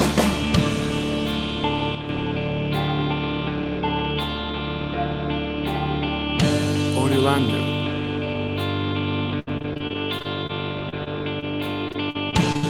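The audio has three kinds of fault, all concentrated in specific stretches. From 1.95 to 2.09 s there is an abrupt level drop of about 6 dB that recovers just as suddenly, most likely one channel dropping out. With one stereo channel gone, the mono mix keeps only half of what both channels shared, and anything present only in the lost channel vanishes. On a waveform this appears as a short, sharp-edged step down in amplitude, and on a spectrogram as a uniform dimming across all frequencies for that sliver of time. Between 9.39 and 10.51 s, and again between 11.88 and 12.65 s, the sound turns choppy and robotic. This is repeated packet loss: about a dozen holes in the first stretch and half a dozen in the second, each patched by stretching the last good sound. Roughly a quarter of each span is synthetic fill, and the longest gaps run 74 ms and 61 ms. A spectrogram shows smeared, frozen harmonic bands with blurred onsets repeating at short intervals, and the waveform shows stretches of suspiciously regular, repeated cycles. 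Between those bursts, short concealed packet loss occurs at 10.89–10.94, 11.04–11.08 and 11.40–11.44 s. Each drop of about 20 ms is filled with a continuation of the preceding sound and crossfaded back, producing a brief smear or wobble. These show up as tiny horizontal smudges interrupting the spectral detail.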